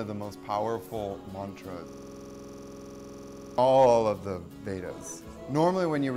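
There's a system hang loop running from 1.89 s to 3.58 s. The audio suddenly locks onto a single 46 ms slice and repeats it about three dozen times, which gives a rough, rattling buzz at 21.5 Hz before normal sound comes back. That's what you get when the machine or driver stalls while the audio hardware keeps replaying the same ring buffer, and a loop that length fits a 2048-sample buffer.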